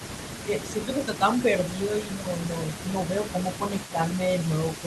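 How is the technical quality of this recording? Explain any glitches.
It's a speech recording from a speakerphone call, and it has two audible problems, with the call codec's top end rolling off around 12 kHz.

An echo leak runs through the whole clip: a faint delayed copy of the speech trails about 330 ms behind, roughly 20 dB down. It's likely the far end's loudspeaker feeding its mic and the echo canceller not fully scrubbing it before sending it back.

Speech is suppressed in double talk four times: 0.45–1.23 s, 2.16–2.27 s, 2.82–2.94 s and 3.92–4.17 s. The voice ducks a few dB, about 10 dB at 2.16 s, likely because the echo canceller couldn't separate talker from echo and turned both down.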